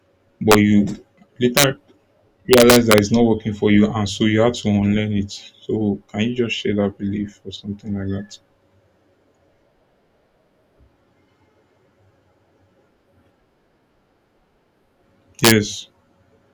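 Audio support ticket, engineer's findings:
Integer overflow: sharp cracks on speech peaks at 0.52–0.54, 1.57–1.64, 2.53–2.98 s (before "it's not working for") and 15.45–15.52 s. Gain stage about 2–5 dB over full scale, wrapping instead of clamping.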